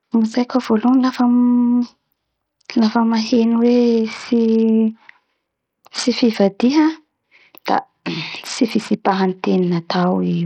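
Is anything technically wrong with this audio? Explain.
Yes. Throughout the speech there's heavy grit and flickering treble with nothing above 19.5 kHz, likely Bluetooth SBC compression starving its top sub-bands of bits, which fits roughly 64 kbps.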